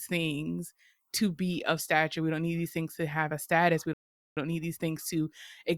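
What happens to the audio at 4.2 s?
At 4.2 s the speech cuts to dead silence, a gap of about 430 ms from 3.93 to 4.37 s, before resuming with "don't need these things". This playback stall is likely the player running out of data or having its thread blocked until it recovered.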